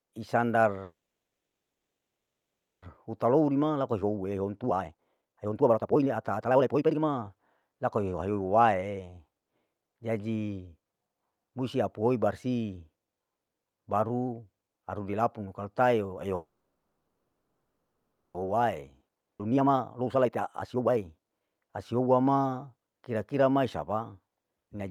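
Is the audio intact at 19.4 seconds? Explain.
No. A skip ahead occurs at 19.38 to 19.41 s: playback jumps forward past about a second of speech that was discarded while later audio was already queued, so the two sides are butted together with only a 10 ms fill, a near-instant splice.

A jitter buffer speed-up also spans 18.46 to 22.07 s, covering that moment. The receiver repeatedly trimmed short pitch-period-sized pieces to shed roughly a second of excess buffered delay, so speech plays at 131% speed with unchanged pitch and sounds hurried.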